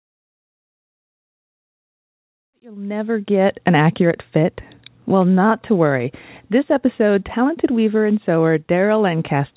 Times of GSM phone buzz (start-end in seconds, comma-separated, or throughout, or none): none